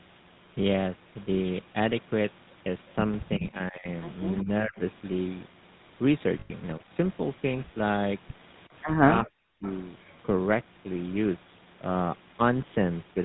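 Throughout the speech, the GSM full-rate codec is plainly audible. The coder rebuilds each sound from a vocal-tract model driven by a sparse pulse train, which fits the 13 kbps full-rate codec, giving a buzzy, gravelly roughness. A spectrogram shows a hard ceiling at 4 kHz with coarse, smeared harmonics.

From 6.40 to 6.51 s come lost GSM frames. For about 100 ms, which fits roughly five missing frames, the decoder repeats the last good frame's settings, so the sound holds on a rough metallic ring. The waveform shows a repetitive stretch.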